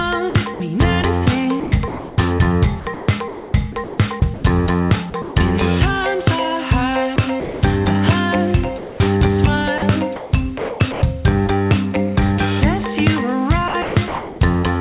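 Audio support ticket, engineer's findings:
Sound chopped by the voice detector, 0.3–0.6, 1.6–2.18, 2.8–4.44, 5.1–5.36, 7.16–7.62, 9.78–11.02, 13.68–14.4 s: choppy gating. Likely sender VAD toggling repeatedly and inserting comfort noise.

Sound dropped by the voice detector, 8.78–9.0 s: about 0.2 s of sound gone, comfort noise in its place. Likely sender VAD misclassifying quiet sound as background and halting transmission until retrigger.

Audio band-limited to about 4 kHz, consistent with G.711 A-law at 64 kbps.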